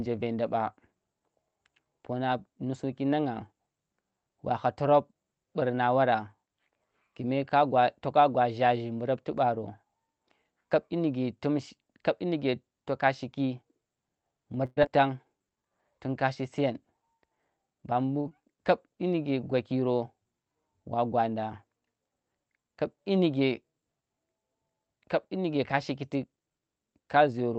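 From 14.65 to 14.85 s, the sound is carried on artificially for roughly 0.17 s and fades. About 60 ms of the real audio never returns. The likely cause is a long network dropout. The receiver continued the last sound, then resumed further on.

From 15.33 to 15.70 s, just before "tun kashi", a jitter buffer slow-down stretches the audio. The receiver repeated tiny pitch periods to rebuild its reserve, adding 50 ms. Speech plays at 88% speed, same pitch, drawn out.

After "tun kashi", from 16.71 to 17.92 s, a jitter buffer speed-up trims small pitch-period slices, roughly 100 ms in total. The buffer held too much audio. Speech runs at 108% speed, same pitch, sounding a little hurried. It happens again after "yinike ka", 25.74 to 26.40 s, at 107%, removing about 50 ms.

From 18.21 to 18.27 s, a short stall from a late packet holds the sound. The buffer ran empty, so the receiver stretched the last sound by 41 ms until the packet arrived. 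Nothing is lost, but the sound lingers with a slight buzz or dip.

From 18.29 to 18.43 s comes a short concealed packet loss. About 20 ms never reached the decoder in time. The receiver filled the gap with an 18 ms continuation of the previous sound, then blended back. It is heard as a brief smear or wobble.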